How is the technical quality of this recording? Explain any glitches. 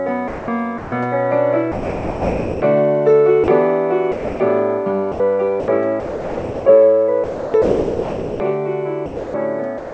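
The recording is marred by repeated voice-detector gating, with the sound either breaking up or vanishing into synthetic noise. It has passed through a call path with nothing above 8 kHz, which fits a G.722 wideband codec at 64 kbps.

Sound chopped by the voice detector occurs at 0.28–0.92 s, 5.12–6.66 s, 7.24–8.40 s and 9.06 s to the end. The sender's detector likely toggled repeatedly, replacing about 0.34, 0.82, 1.08 and 0.44 s respectively with comfort noise. The sound is choppy, with holes where it was replaced.

Sound dropped by the voice detector occurs at 1.72–2.62 s, 3.44 s and 4.12–4.40 s. The detector likely judged quiet sound to be background and stopped sending, so the receiver filled in comfort noise. The sound gives way to steady hiss for 0.9 s, 40 ms and 0.28 s.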